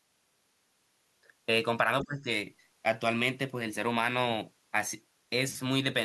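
The other side's voice leaking through appears from 2.0 to 2.05 s, a brief scrap of a second voice sitting roughly 15 dB under the talker. It is most likely residual echo: the far end was playing over the talker's loudspeaker, was picked up again by the microphone, and was not fully removed by the echo canceller. The leak is short and faint, a ghost of another voice rather than a clear phrase.

Speech suppressed in double talk follows from 2.04 to 2.28 s, overlapping the end of that leak. The talker's own voice ducks by as much as about 15 dB, with around a fifth of a second of it pulled down or broken up. The likely cause is the echo canceller meeting both sides talking at once, failing to tell the near voice from the loudspeaker echo, and attenuating everything, so the voice briefly sinks.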